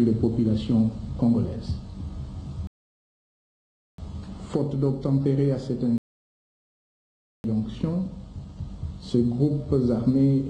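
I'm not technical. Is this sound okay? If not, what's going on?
No. The sound stops dead into silence twice, from 2.67 to 3.98 seconds and from 5.98 to 7.44 seconds, then picks up exactly where it left off. This is a rebuffering stall: the player ran out of downloaded audio and waited for more, adding about 1.3 and 1.5 seconds of gap without losing any sound.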